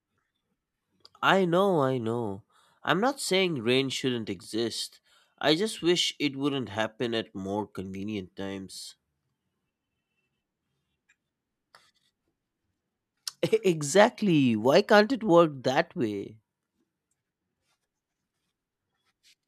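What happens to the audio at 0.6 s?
Nothing goes wrong at 0.6 s; the speech carries on intact through that moment, with no dropout, click or distortion to be heard.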